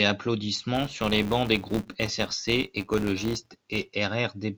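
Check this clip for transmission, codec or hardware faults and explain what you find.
One fault is present in this speech clip. Filter restarted on every block, from 0.75 s to 3.88 s: the filter drops its stored state at each block boundary and restarts from silence, so every block opens with a small transient. These repeat as a steady buzz at about 188 Hz that rises and falls with the speech level, which fits a 256-sample block.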